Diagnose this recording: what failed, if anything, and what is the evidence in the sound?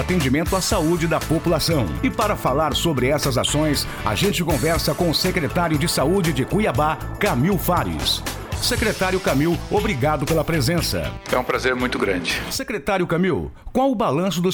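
Nothing in the signal chain points to a failure: no stage leaves an audible fault anywhere in the recording.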